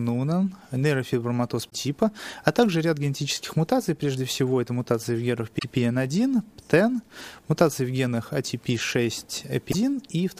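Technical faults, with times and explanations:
1.66–1.73 s, 5.55–5.64 s and 9.68–9.75 s, damaged data in a compressed stream: three brief garbled bursts, each roughly 70 to 80 ms, that break abruptly into the sound before it carries on. At each point the encoded bytes are corrupted, so the decoder misreads or discards those frames, loses its place in the stream and searches for the next valid frame header before normal output resumes.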